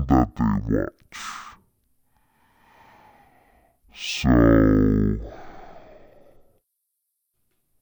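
From the first moment to the end, the speech plays at half speed and a full octave low, the mark of stereo read as mono. Left and right samples, stored alternately, were taken as one continuous channel, so each second of sound is stretched across two. On a spectrogram the harmonics sit at half their normal spacing, with a fainter mirrored copy in the upper half of the band; the waveform looks slackened.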